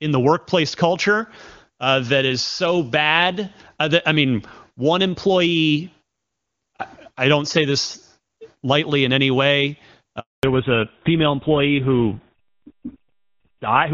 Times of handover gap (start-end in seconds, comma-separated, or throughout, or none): 10.19-10.43